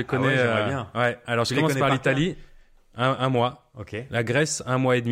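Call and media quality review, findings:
No call or media quality faults found in this speech clip.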